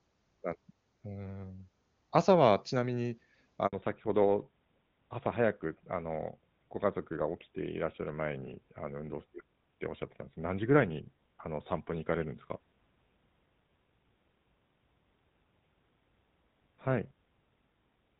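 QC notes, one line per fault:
3.67 to 3.73 s, handover gap: the sound dies away and stays silent for 60 ms while the call switches networks, and no speech frames arrive during that switch.
3.73 s to end, fallback to narrowband: everything above 4 kHz disappears and the speech turns duller and rougher, which fits a drop from HD Voice at 23.85 kbit/s to GSM full rate.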